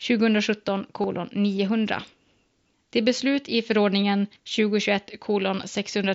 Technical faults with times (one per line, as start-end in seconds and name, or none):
1.02 concealed Bluetooth headset packet loss